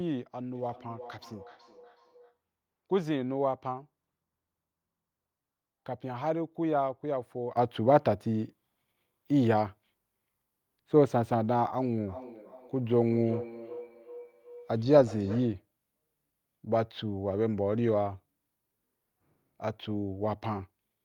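From 0.55 to 2.39 s the speech comes back to itself as a feedback echo between two devices: a second device in the room appears to replay this microphone's signal, which is picked up again, and the local echo canceller cannot remove sound it did not play. Each word returns roughly every 400 ms, thinner and more ringing, peaking at about 19 dB below the speech. On a spectrogram it shows as faint, evenly spaced copies of each syllable trailing to the right.

At 7.57 s the level steps up by about 11 dB and stays there to the end, with the background noise rising by the same amount at the same instant. The likely cause is a sudden gain jump, a digital gain change applied between one sample and the next without a ramp. On the waveform the envelope widens abruptly at that point, and on a spectrogram the noise floor brightens across all frequencies in one vertical line.

From 12.07 to 15.67 s the same feedback echo between two devices returns. 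The copies again arrive about 400 ms apart, now peaking at about 14 dB below the speech. They are more prominent than in the first stretch and show as stronger repeated ghost bands behind each syllable.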